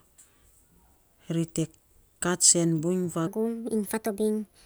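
At 3.27 s the speech jumps into a section at the wrong speed that lasts to the end of the clip. It plays about 1.33 times too fast, so the voice sounds hurried and rises by roughly five semitones, likely because that stretch was played back or edited against the wrong clock. Pitch and tempo shift together at one instant, which tells it apart from a pitch-shift effect, where the pace would stay the same.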